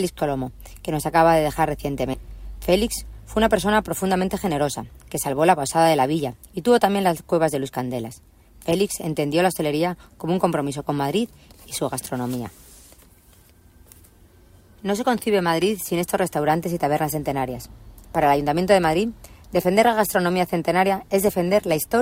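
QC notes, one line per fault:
2.13–2.15 s, skip ahead: roughly 0.7 s of audio is missing, and playback jumps forward with no gap, so the two sides of the cut butt together abruptly.
4.16–5.38 s, jitter buffer speed-up: repeated removal of short pitch-period segments, about 50 ms in total, runs the audio at 104% speed with unchanged pitch.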